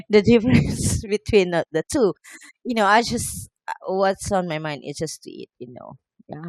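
No technical faults can be heard anywhere in the speech recording, with the signal level, continuity and timing holding steady throughout.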